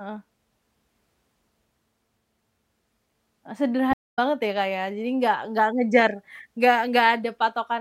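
A speech recording with a stream reconnect between 3.93 and 4.19 s: the connection dropped, playback went silent for about 200 ms, and a fresh decoder picked up the stream mid-flow, rejoining roughly 150 ms further on, so a short stretch of speech is skipped before "banget ya". On a waveform this shows as a flat gap that restarts with a soft ramp. A spectrogram shows a blank vertical band that cuts cleanly through the speech harmonics.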